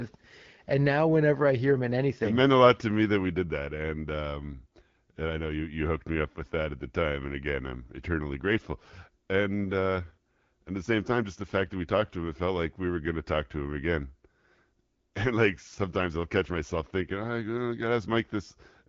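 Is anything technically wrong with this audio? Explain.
No, there's no technical fault here: the speech carries the band-limited character of an AMR wideband (HD Voice) path, consistent with a mode around 12.65 kbit/s, and that path is working as intended.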